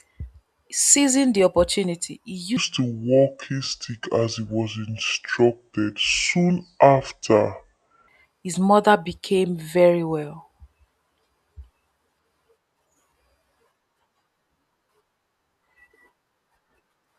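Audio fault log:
2.57–8.08 s, wrong sample rate: after "the opportunity he" the speech drops to two-thirds speed (0.667×) and about 7 semitones lower, returning to normal before "his mother became very". That ratio fits 48 kHz samples played back at 32 kHz with no conversion. Unlike a pitch shift or time-stretch, where one changes alone, here pitch and tempo fall together by the same ratio, so the voice sounds deep, slowed and drawn out.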